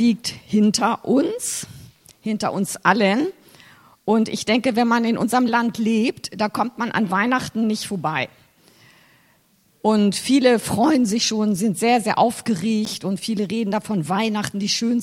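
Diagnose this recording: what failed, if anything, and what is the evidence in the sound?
The driver or buffer stage failed once: the output buffer wasn't filled in time, leaving a block of digital silence at 12.85 s. For about 11.6 ms, which fits a 512-sample buffer, the sound drops abruptly to silence and returns with no fade, so it's heard as a tick or dip.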